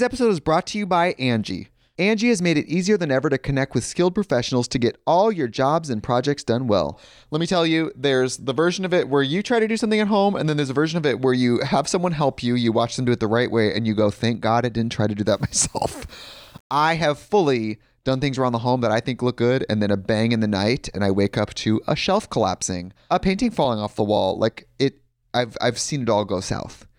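From 15.28 to 16.86 s, between "didn't try to do" and "have fully done things", the speech turns grainy: low bit depth without dither, likely rounding to about 8 bits. Unlike steady dithered hiss, this grit, roughly 35 dB down, tracks the signal and roughens quiet sounds.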